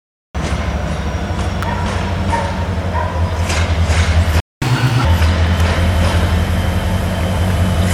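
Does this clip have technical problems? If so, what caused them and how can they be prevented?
Yes, there are four faults.

The clip opens on digital silence, and at 0.35 s the sound cuts in abruptly, already mid-flow, with no attack or fade. This is a cut-off start: capture began after the sound was already under way. To prevent it, start recording a moment before the source begins.

At 1.63 s a sharp snap sits on top of the audio and lasts only a few milliseconds. This is an electrical switching spike, likely from a nearby switch, motor or static discharge arcing and being picked up by the audio line. To prevent it, use shielded, grounded cabling and keep it away from switching equipment.

From 4.40 to 4.62 s the sound drops out to silence for about 214 ms in the middle of its flow. This is a playback stall. The player likely ran short of buffered data or had its thread blocked, and produced nothing until it recovered. 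To prevent it, give playback a larger buffer and a higher-priority audio thread.

Right after the gap, from 4.62 to 5.05 s, the audio runs at 1.5 times normal speed and its pitch jumps by about seven semitones, then settles back. This is catch-up at higher speed: the player resampled its backlog faster to recover the time lost in the stall. To prevent it, avoid the stall, or set the player to drop or time-stretch the backlog rather than resample it.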